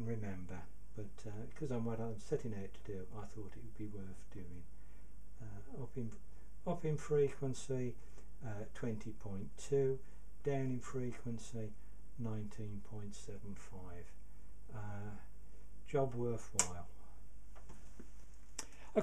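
No technical faults are audible.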